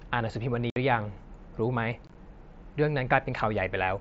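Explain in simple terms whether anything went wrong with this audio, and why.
Yes, something went wrong: unconcealed Bluetooth headset packet loss. The speech drops to abrupt silent holes, around 0.70 to 0.76 s and in choppy fragments from 2.07 to 2.15 s. Nothing papers over these holes, unlike the smoothing or repetition that would mask a concealed loss.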